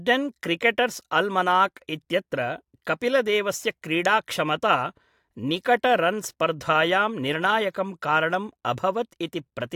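No technical faults can be heard anywhere in the recording.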